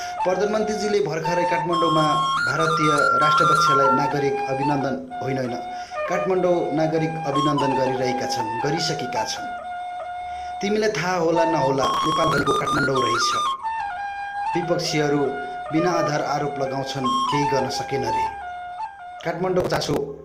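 A loudspeaker feedback squeal kicks in at 1.76 s: a 1.4 kHz tone swells over roughly a second and a half until it sits about 5 dB above the sound, then cuts off at 4.26 s. The mic is picking up its own speaker and the loop runs away at that frequency. Later there's processor overload crackle from 11.84 to 12.83 s and again from 19.60 to 19.97 s, a gritty tearing made of lots of tiny skipped chunks. That fits a processor missing its deadlines on buffers of around 5 ms, roughly 50 of them each time.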